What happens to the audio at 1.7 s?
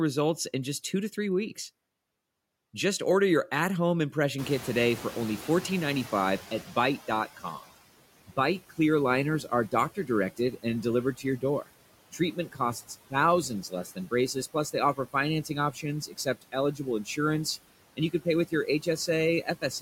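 At 1.7 s you're hearing noise suppressor artifacts, which run through the whole clip. The suppressor treats steady background noise band by band, cutting it by about 17 dB, so the noise dips in pauses and swells under the speech.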